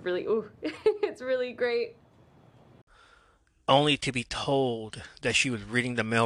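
No technical faults can be heard anywhere in this speech recording. There is no moment in the audio that calls for a timestamp or an account of something going wrong.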